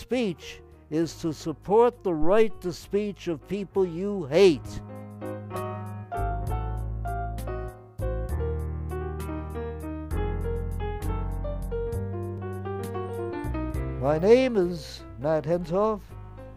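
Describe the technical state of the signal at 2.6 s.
At 2.6 s you're in the tail of a phantom power thump that runs from about 2.22 to 2.64 s. The supply switching on a live input sends a voltage step through the coupling capacitors, giving a deep thump peaking around -14 dBFS that dies away over roughly 94 ms.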